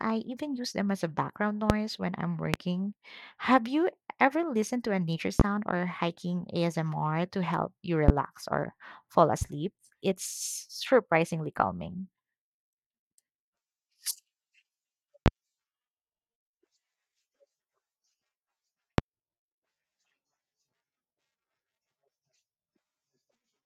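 Speech, hit by six loud pops at 1.70, 2.54, 5.40, 8.08, 15.26 and 19.0 s, the first just after "them as a background". Each is a single thump of about 36 ms, roughly 25 dB above the voice, which continues underneath, unlike a dropout. The likely cause is a voltage pulse from static or a switch.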